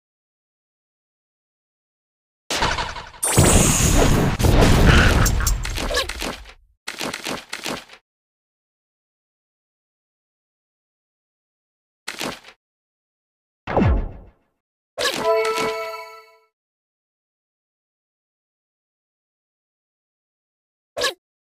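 The clip opens in dead silence that lasts until 2.51 s, with no room tone at all, and the sound then starts abruptly as if already in progress. This audio dropout to silence most likely comes from the input being lost while the recorder kept writing zeros.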